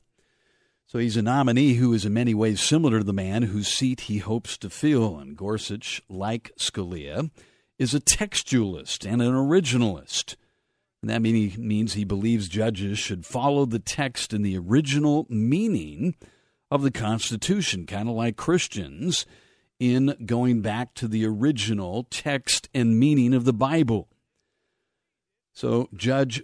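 No technical faults can be heard anywhere in this speech recording.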